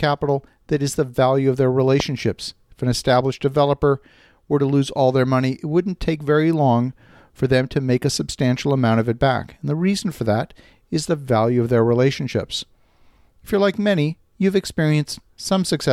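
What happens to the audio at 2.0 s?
A loud pop cuts in from 2.00 to 2.02 s, right after "the value of their". It is a single sharp click, well above the level of the speech, which carries on underneath. The likely cause is a brief voltage spike, from a switch, plug or static discharge, entering the signal path.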